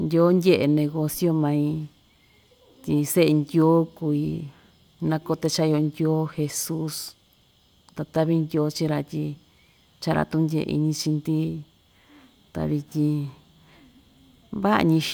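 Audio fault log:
No faults can be heard anywhere in this speech recording. There is nothing to log.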